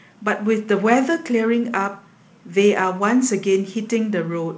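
Nothing in this speech recording stood out as a fault on listening.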